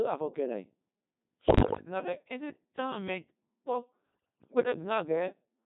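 Throughout, the speech sounds robotic and buzzy, typical of the Codec 2 vocoder, which fits a 2.4 kbit/s mode, rebuilding the voice from sine waves rather than the original waveform. From 1.48 to 1.86 s and again from 4.13 to 4.60 s, the speech breaks into bleeps, warbles and pitch jumps. These are bit errors on digital voice radio: flipped bits, at a heavy rate, corrupted the pitch, level and spectrum of whole frames.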